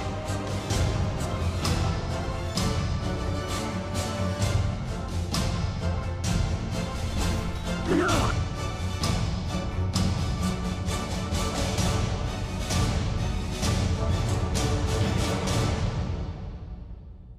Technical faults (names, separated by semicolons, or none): none